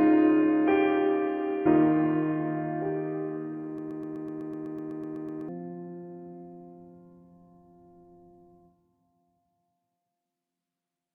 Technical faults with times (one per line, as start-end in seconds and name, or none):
3.78-5.49 broken-record loop